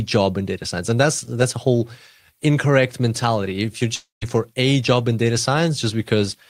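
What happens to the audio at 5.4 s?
Nothing goes wrong at 5.4 s: the speech continues intact through that moment, with no dropout, click, distortion or other fault.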